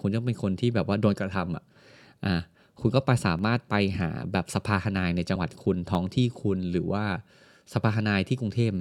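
A stream that briefly lost a fraction of a millisecond of samples is the likely cause of a sharp, single click at 3.39 s. The waveform jumps straight to a later value. These dropped samples recur as clicks at 4.97 s and 5.95 s.

At 5.34 s the decoder skipped compressed frames, discarding roughly 50 ms of audio, which fits two frames of about 23 ms each. The sound lurches forward at the join.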